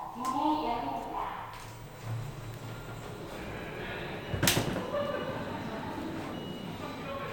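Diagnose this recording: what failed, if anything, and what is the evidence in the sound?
At 2.54 s a sharp transient sits on top of the sound, an electrical switching spike lasting about a millisecond. The stage is the analogue wiring: a nearby switch, motor or static discharge likely arced, and the audio line picked up that burst as an added transient.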